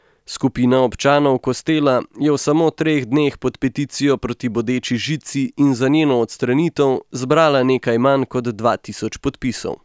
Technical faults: none

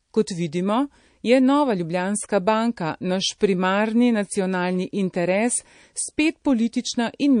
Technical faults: MP3 compression; pre-echo

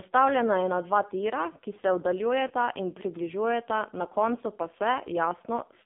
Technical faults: AMR narrowband mobile codec; lost AMR speech frames

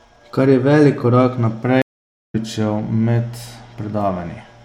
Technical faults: stream reconnect

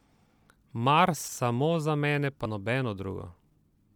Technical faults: compressed frames skipped

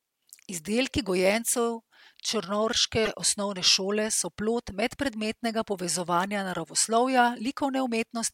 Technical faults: corrupt frame decoded

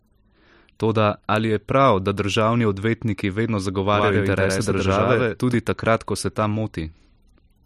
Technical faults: doubled audio track

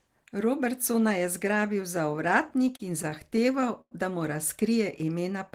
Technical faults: repeated stalls (stutter)

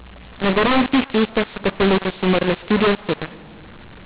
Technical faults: mu-law and A-law mixed up

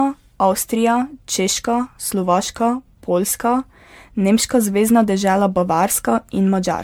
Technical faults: generation loss

